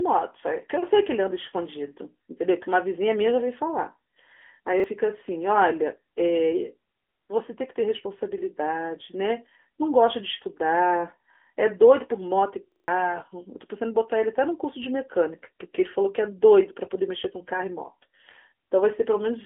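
Throughout the speech, the AMR narrowband mobile codec confines the sound to a telephone line band of roughly 250 Hz to 3.4 kHz, with nothing above 3.6 kHz. The codec rebuilds speech from a vocal-tract model and a few pulses per frame, so its damage is plainly audible as a buzzy, synthetic edge. The degree of coarseness points to a mid-rate mode around 10 kbps. A plain low-pass filter would only dull the sound, but this codec adds that artificial, modelled quality.

At 4.80 s a repeated buffer produces a brief stutter lasting 0.04 s. New audio arrived late, so the last chunk played once more with a hard join, and about 40 ms of fresh audio was lost. At 12.72 s the problem is longer. The same chunk plays four extra times until 12.88 s, making a stutter that skips roughly 150 ms. Both events fit a 40 ms buffer. A dropout would leave a gap of silence, whereas a repeated buffer fills the gap by looping audio already heard.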